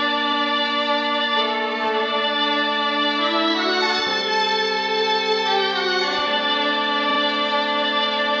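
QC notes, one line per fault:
0.28–0.38 s, repeated frames: a 93 ms block of the music plays once more, a stutter consistent with two compressed frames sent twice. The join between copies can click if they don't line up. Adds 93 ms.
7.06–7.17 s, repeated frames: a shorter 46 ms block, which fits a single frame, plays two extra times, giving a quicker triple stutter with a join at each restart. Adds 93 ms.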